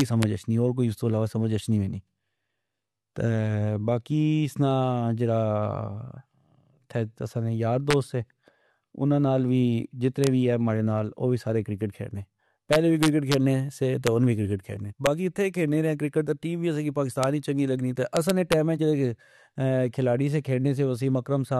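Violent cracks tear through the loudest moments of the speech at 0.00–0.23 s, 7.91–7.93 s, 10.24–10.27 s, 12.73–13.34 s, 14.07 s, 15.06 s, 17.24 s and 18.17–18.53 s. This is integer overflow. Peaks pushed up to about 1 dB past full scale wrapped to the opposite sign instead of being limited, so each flips across the whole range and sounds far harsher than clipping.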